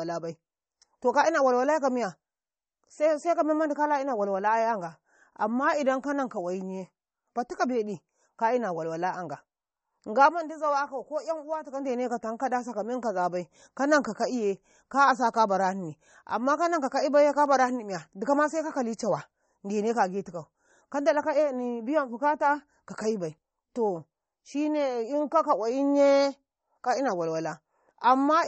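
Throughout the speech, likely MP3 compression at a low bitrate: watery, swirly sibilants and smeared attacks. A spectrogram shows a hard ceiling near 8.4 kHz with flickering, patchy upper bands.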